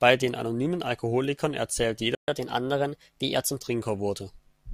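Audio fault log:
2.15–2.28 s, playback stall: the speech drops to silence for about 129 ms mid-flow, then resumes where it stopped. The gap points to the player running short of data or its output thread being held up, likely an underrun in the audio buffer.
2.28–3.57 s, catch-up at higher speed: right after the stall the speech runs at 1.1 times normal speed, with pitch raised by roughly one and a half semitones. The player is resampling its backlog to recover the lost time, so tempo and pitch rise together, then return to normal.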